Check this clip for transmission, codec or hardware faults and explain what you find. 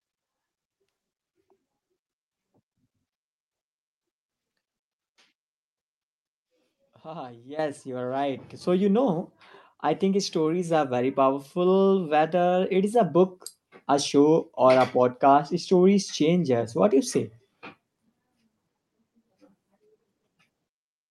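The speech contains two sudden level jumps from the microphone input.

Microphone volume stepped up, at 7.59 s and 8.61 s. The call software judged the microphone too quiet and raised the device's input volume in single steps rather than gradually, first by about 11 dB just before "you are right", then by about 5 dB after it, just before "you know I think". Voice and background noise jump louder together at each point, so the whole sound lurches upward twice in quick succession.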